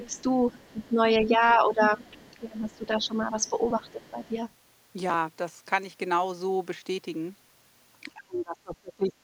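From 0.00 to 4.31 s, the speech dips in pieces, by up to about 15 dB, for roughly two seconds in total. This is speech suppressed in double talk, likely from the echo canceller turning down both sides at once. From 0.04 to 4.35 s, the other side's voice leaks through faintly, about 30 dB below the speech, likely as uncancelled loudspeaker echo. From 8.14 to 9.13 s, speech suppression returns more deeply, dropping by around 30 dB.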